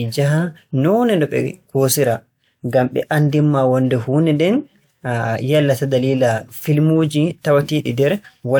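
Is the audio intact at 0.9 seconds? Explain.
Yes, at 0.9 seconds the audio is intact, with no dropout, click, distortion or other fault to be heard at that moment.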